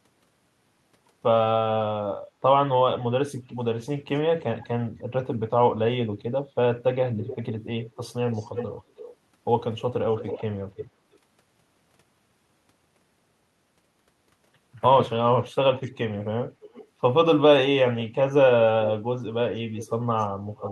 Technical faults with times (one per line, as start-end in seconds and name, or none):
3.36-4.67 echo leak
7.20-9.16 echo leak
9.79-11.17 echo leak
15.82-15.97 echo leak
16.62-16.87 echo leak
19.74-20.72 echo leak